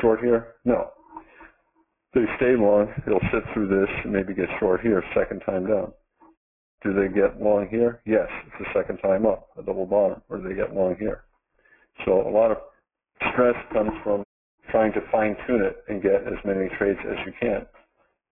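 Aliasing runs through the whole sound: content above 3 kHz folds back as gritty, unrelated tones roughly 15 dB below the signal, which fits a drop to a 6 kHz rate without filtering. Plain band-limiting would only dull the top; these added false pitches mark aliasing.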